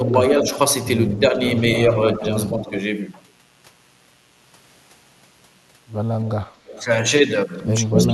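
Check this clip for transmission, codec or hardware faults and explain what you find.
Three faults are audible: a mains buzz throughout, speech suppressed in double talk twice, and echo leak four times.

Mains buzz runs the whole length of the clip. Switching spikes from a dimmer, rectifier or poor shielding reach the signal path at twice each 60 Hz cycle, adding harmonics well into the kilohertz range. The result is a steady, raspy buzz sitting about 40 dB below the speech.

Speech is suppressed in double talk from 0.0 to 0.47 s and again from 7.95 to 8.06 s. The echo canceller likely could not separate its own talker from the loudspeaker echo and attenuated both. The voice dips by up to about 10 dB, briefly, in the first stretch, and by about 5 dB in the second.

Echo leak appears at 0.44 to 0.51 s, 1.15 to 2.81 s, 6.66 to 6.85 s and 7.86 to 8.07 s. A loudspeaker's output was likely not fully cancelled at the far microphone and returned to the line. 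A copy of the speech trails by roughly 230 ms, at about 15 dB below it in the first two stretches, about 25 dB below at 6.66 s, and 5 dB below at the end.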